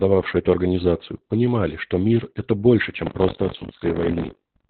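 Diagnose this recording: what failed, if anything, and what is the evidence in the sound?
Opus voice compression, codec stage, throughout: the speech is muffled and hoarse with nothing above 4.2 kHz, pointing to narrowband SILK at around 8 kbps.

Buffer tearing, driver or buffer stage, from 3.05 s to the end: a 46.9 Hz robotic buzz, fitting a 1024-sample buffer, where about a fifth of each buffer replays audio roughly 40 ms old.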